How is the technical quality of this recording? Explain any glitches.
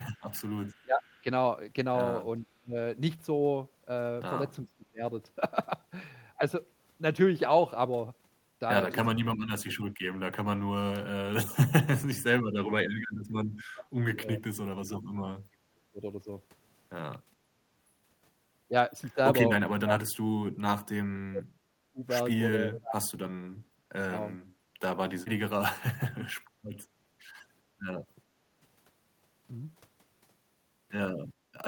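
The recording has several echo-canceller problems, grouped near the start, through the middle and at the very end.

Between 0.15 and 1.21 s there is an echo leak: a faint delayed copy of the speech trails the original by 420 ms, roughly 35 dB below it. It likely comes from a loudspeaker on the far end whose echo canceller let some of its microphone pickup through and sent it back. Unlike the other faults here, nothing is lost. Something extra is added, a ghost arriving about four tenths of a second late.

Speech suppressed in double talk appears four times: 0.83 to 2.76 s (about half a second affected, dips near 25 dB), 4.65 to 5.04 s (about 0.3 s, near 25 dB), 9.13 to 16.0 s (about 3 s in total, dropping as far as 40 dB), and 19.65 to 25.88 s (about 2 s, up to roughly 35 dB). The cause is likely a canceller that, with both sides talking at once, could not separate the talker from the loudspeaker echo and turned everything down. 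The talker's own speech sinks or breaks into pieces rather than gaining a copy.

Background gated by the echo canceller occurs at 28.32 to 28.52 s, with the room sound dipping about 12 dB, and at 31.35 to 31.52 s, dipping about 7 dB. While the loudspeaker played, the canceller clamped the microphone briefly, then released it. These differ from the double-talk dips in what they affect: the ambient room tone drops out for a fraction of a second, not the talker, and they are much shallower.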